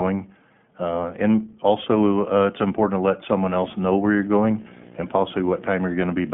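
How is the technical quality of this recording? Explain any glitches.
The recording has clear technical damage: a low-bandwidth codec colours the whole clip, and a display buzz joins partway through.

The iLBC codec affects the entire clip. Nothing passes above about 3.7 kHz, so the speech sounds narrow and muffled. Each 20 ms frame is coded on its own. That gives the voice a plainly rough, slightly synthetic edge. The damage fits iLBC's 15.2 kbps mode.

Video or display buzz starts at 3.42 s and lasts to the end. A screen or video cable is leaking into the audio path. It produces a 59.94 Hz buzz with hash above it. A thin whine sits at 15.7 kHz. The buzz is loud, roughly 10 dB below the speech.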